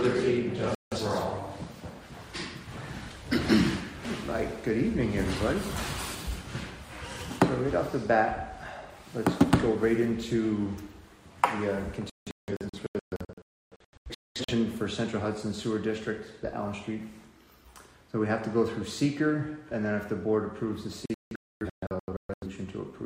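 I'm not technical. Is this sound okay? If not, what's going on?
No, it drops out three times. This is a digital broadcast dropout: the receiver briefly lost the signal and muted. There's a quick gap near 0.75 s, then bursts of short holes from 12.1 to 14.5 s and from 21.1 to 22.5 s. Whatever played during those gaps is gone.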